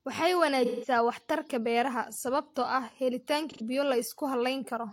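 AAC frame loss with concealment at 0.65 to 0.88 s, just before "waxtarka beeraha sababtoo ah", and 3.50 to 3.61 s: the decoder patched missing frames from earlier spectrum, leaving smeared, noisy speech.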